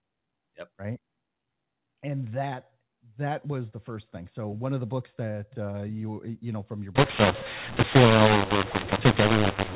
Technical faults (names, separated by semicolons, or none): mu-law and A-law mixed up